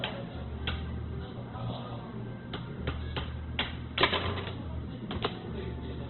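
Throughout, heavy Opus compression, likely at a rate near 12 kbps, strips everything above 4.2 kHz, leaving the sound narrow, rough and grainy.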